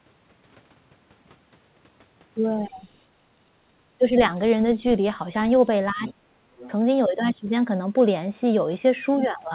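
From 5.92 to 6.45 s the speech is heavily attenuated, falling by as much as about 40 dB across roughly half a second. This is speech suppressed in double talk, most likely because both ends were active at once and the echo canceller, unable to tell the near talker from the loudspeaker echo, clamped down on the whole microphone signal and took the wanted speech with it.

Shortly afterwards, from 6.59 to 6.7 s, a brief scrap of a second voice comes through about 20 dB below the main speech. This is the other side's voice leaking through, likely residual loudspeaker echo that the canceller failed to remove from the microphone path, so a short fragment of the far end reaches the listener. The whole clip is band-limited with nothing above 4 kHz, which fits narrowband G.711 mu-law coding on the call path.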